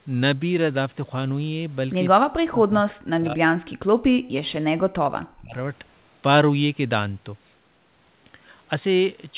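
From 2.17 s to 4.7 s, and again from 4.98 s to 5.55 s, the speech drops sharply in level, by roughly 40 dB at its deepest. About two seconds of the first stretch and half a second of the second are affected. This is likely speech suppressed in double talk, where the echo canceller turned down the near talker along with the loudspeaker echo. The waveform envelope collapses in patches, and the spectrogram, capped near 4 kHz by the G.711 path, fades to faint traces.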